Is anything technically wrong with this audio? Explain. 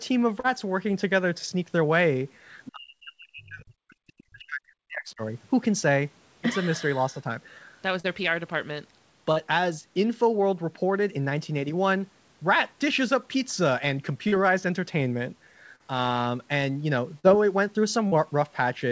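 Yes, there are three kinds of fault, all tied to the call link.

Short concealed packet loss occurs at 0.40, 8.00, 9.32, 14.28, 15.76, 17.19 and 18.07 s. Each time, about 40 ms of audio arrived too late, and the decoder filled the gap by extending the preceding sound. You hear a brief smear or wobble. On a spectrogram, each shows as a short patch of repeated, slightly blurred harmonics or diffuse noise.

The other side's voice leaking through appears at 2.65 s and again at 4.08 s. The first scrap sits roughly 20 dB below the talker, and the second is much fainter. This is likely residual loudspeaker echo that the canceller missed. It comes through as a second voice in scraps and shows as faint, separate harmonic traces.

Speech suppressed in double talk runs from 2.73 to 5.22 s, with about two seconds affected in total. The talker's level dips sharply, at its deepest by around 40 dB, with high frequencies thinning and pieces cutting out. 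The likely cause is the echo canceller ducking both sides while they overlap. On a waveform the envelope collapses in chunks, and a spectrogram shows dark gaps.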